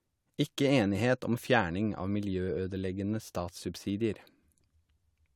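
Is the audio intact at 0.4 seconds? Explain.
Yes, at 0.4 s the speech plays through cleanly, with no dropout, click, distortion or other technical fault at that point.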